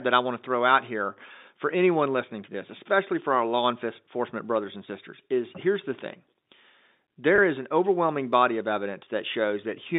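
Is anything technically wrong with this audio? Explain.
Yes. There is packet loss with pitch repetition from 7.36 to 7.38 s, just before "is an overwhelming body." About 20 ms of audio drops out, which fits a single lost packet. The receiver fills the gap by repeating the last pitch period. This gives a brief held, buzzy blip. The G.711 telephone coding limits the band to roughly 150 Hz to 3.7 kHz.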